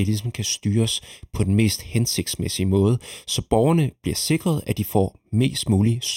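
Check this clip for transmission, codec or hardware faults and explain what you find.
One fault runs through the whole speech clip: channel delay (comb filtering). One channel arrives about a third of a millisecond late, and mono summing cancels energy near 1.5 kHz and evenly spaced notches above. Speech sounds hollow and phasey. The notches never move, which rules out flanging.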